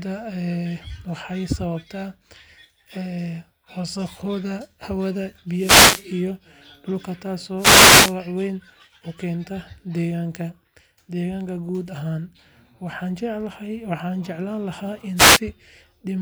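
Speech with three wireless microphone noise hits, at 5.54–6.08 s, 7.56–8.16 s and 15.16–15.40 s. FM signal fades let receiver noise swish through, seen as broadband vertical bands.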